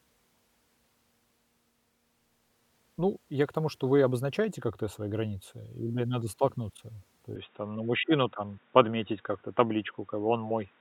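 At 7.36 s the speech turns dull and boxy and stays that way to the end. Nothing is heard above 3.8 kHz. The level shifts by about 5 dB and faint new background noise appears, with no gap. The input likely switched to a poorer device.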